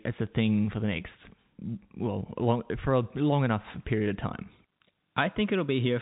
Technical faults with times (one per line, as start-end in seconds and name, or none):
none